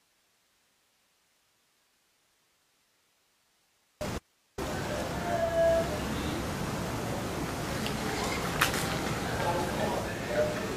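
At 4.18 s the sound cuts out abruptly and returns at 4.58 s, a gap of about 394 ms. This is an audio dropout to a faint residue. The signal vanishes mid-flow, and only hiss remains, roughly 40 dB below the normal level. The likely cause is a break in the wanted signal while the path after it stayed live. On a waveform the envelope collapses to a thin band with vertical edges. A spectrogram shows a sharp-sided stripe of faint, even noise across all frequencies.

From 5.33 s to 10.41 s the audio shows digital radio blending to analogue, here the FM broadcast. The receiver cross-fades over about 439 ms into the analogue copy and later back out. During that stretch hiss rises to roughly 30 dB under the signal, and the level shifts by about 1 dB. A spectrogram shows a brighter noise floor.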